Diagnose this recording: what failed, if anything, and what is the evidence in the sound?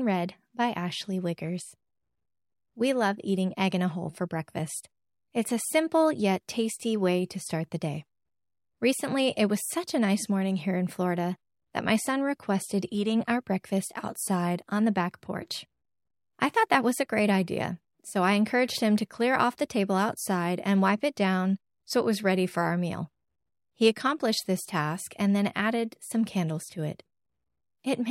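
Nothing failed in this recording, and the sound carries no evidence of a fault at any stage.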